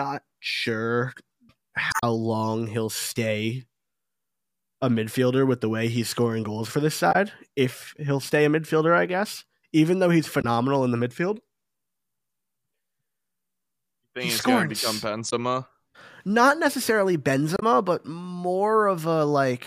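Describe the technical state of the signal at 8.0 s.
At 8.0 s the speech signal is intact, with no dropout, distortion, glitch or other fault audible at that moment.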